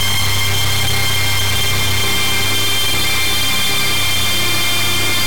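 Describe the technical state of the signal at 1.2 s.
At 1.2 s the signal suffers from integer read as float, present across the whole clip: 32-bit integer samples are being interpreted as 32-bit floats, so values land near zero or far past full scale, producing a harsh, very loud buzzing square wave that collapses to silence in quiet moments.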